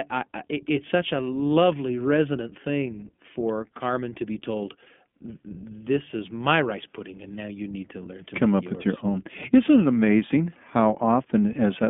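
Right from the start the whole clip goes through the iLBC codec, so the speech sits in a narrow telephone band of roughly 200 Hz to 3.4 kHz, with nothing up top. The damage is plainly audible: consonants lose their crispness and the voice takes on a slightly rough, synthetic grain, the sort you get when each short frame's excitation is coded on its own. That character fits iLBC's 15.2 kbps mode with 20 ms frames.

Then, at about 1.48 to 1.51 s, right after "I it's such a" and before "resonant thing for", there's a lost iLBC frame, a roughly 20 ms dropout. The decoder papers over it by repeating the last pitch cycle with a bit of noise mixed in, so you hear a tiny held, faintly buzzy vowel instead of a hole. Since iLBC frames don't depend on each other, the voice snaps straight back on the next frame.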